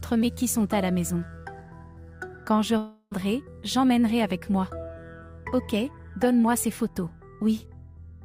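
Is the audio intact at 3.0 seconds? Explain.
No. At 3.0 seconds the audio is inside a long network dropout, from 2.77 to 3.13 s. About 340 ms of sound is lost. The last sound continues as a fading buzz, then briefly goes silent. Likely cause: audio that never arrived.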